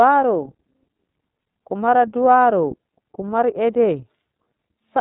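From start to finish, the speech carries the iLBC codec's sound. Nothing is heard above about 3.8 kHz, so the top end is gone and sibilants lose their edge. The codec damage is plainly audible. Voices turn slightly rough and synthetic. The coding works in independent blocks of about 30 ms, which fits a bitrate near 13.33 kbps. Each block's excitation is coded on its own.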